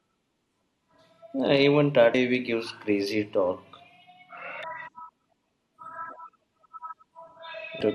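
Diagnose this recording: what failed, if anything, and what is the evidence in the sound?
The codec stage failed, with damaged data in the compressed stream. Brief blips break into the speech at 2.13, 4.63 and 7.81 s. Corrupted bytes made the decoder misread those frames. It lost sync each time and searched for the next valid frame header.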